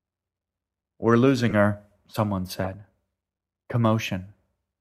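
Speech with corrupt frames decoded at 1.49–1.54 s, 2.64–2.66 s and 3.72 s: damaged compressed frames played anyway, giving short squeaky bursts that fade each time, seen as stray vertical smears on a spectrogram.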